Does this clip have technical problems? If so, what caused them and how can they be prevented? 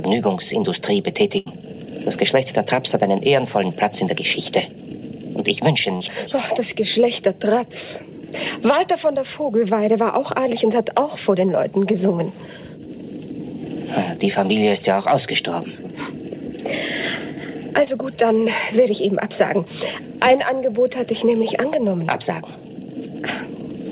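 Yes. There is a burst of packet loss at 1.38 to 1.48 s. Several packets in a row never arrived in time. The receiver stretched the last sound for about 78 ms and faded it down, so a held buzz or fading hiss covers the hole. About 80 ms of real audio is lost, and the sound jumps ahead when it resumes. To prevent it, use forward error correction or redundant packets and a more stable network link.

There are two short concealed packet losses: 5.96 to 6.02 s and 17.84 to 17.88 s. Each time a few hundredths of a second failed to reach the decoder. The receiver filled the first gap with about 45 ms of continued sound, replacing about 40 ms. It filled the second with about 18 ms, replacing about 20 ms. Each heals into a brief smear or wobble. These passages pass through a call path with nothing above 4 kHz, which fits G.711 mu-law at 64 kbps. To prevent them, reduce jitter and packet loss on the network and give the jitter buffer enough headroom.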